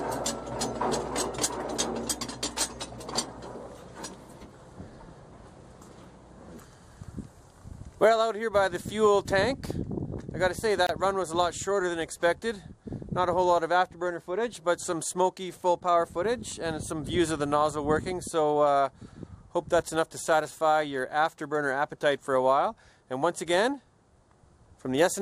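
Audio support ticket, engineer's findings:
Gap at a join of encoded pieces, 10.87 to 10.89 s. Continuous sound drops out for about 26 ms, then resumes where it stopped. Probable component: segment concatenation after encoding. Mechanism: each piece encoded separately and joined untrimmed, so one run's end-frame padding and the next run's start-up delay both remain as a hole, its edges smeared by the codec.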